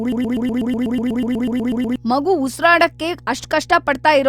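From the very start until 1.96 s the speech is caught in a broken-record loop. A fragment of about 0.12 s repeats back to back, some 15 times, before normal playback resumes at "ಮಗು ಉಸ್ರಾಡೋಕೆ". The likely cause is a stalled player or stream resending its last buffer, so the original audio from that stretch is missing.

Mains hum runs underneath the entire clip. It is a steady 60 Hz tone with low harmonics, sitting roughly 25 dB below the speech, and it points to a ground loop or a nearby transformer coupling the power line into the signal path.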